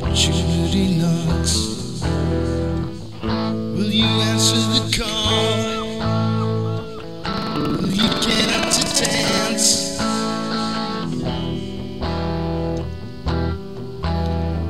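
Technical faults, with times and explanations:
7.29–9.42 s buffer tearing: 21.5 Hz rattle, fitting a 2048-sample buffer, as about a fifth of each buffer repeats older audio; unlike hum, it needs signal.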